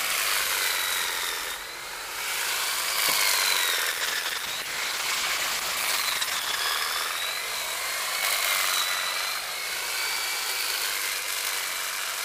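From 3.93 s to 6.65 s the sound turns rough and watery, with the top end dulled so everything seems muffled, then clears. This is a call bitrate drop: the connection's bandwidth estimate fell and the encoder was pushed to spend far fewer bits, coding coarsely and discarding high frequencies. The degradation fits a fall from around 96 kbps to about 11 kbps, held at its lowest for 2.65 s before recovering.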